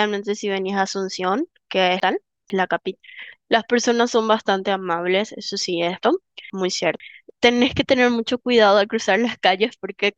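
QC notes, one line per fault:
2.0–3.0 s and 6.0–7.0 s, chunks out of order: in each spot a half-second chunk turns up one chunk late, so two pieces swap places. Nothing's missing, but the sound jumps back and forth and you get a jumbled moment across the three hard joins.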